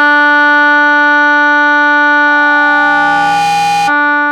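From 2.27 s to 3.96 s the music is overtaken by loudspeaker feedback squeal. A microphone is picking up the loudspeaker it drives, and at 813 Hz the gain around that loop rises above one, so that frequency keeps feeding itself. The result is a single steady tone near 813 Hz that swells over about a second until it stands roughly as loud as the music, then cuts off at 3.96 s.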